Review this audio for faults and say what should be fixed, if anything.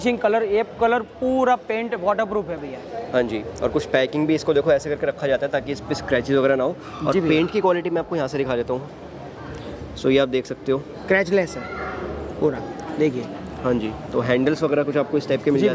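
No faults turned up in this audio, so nothing needs to be fixed.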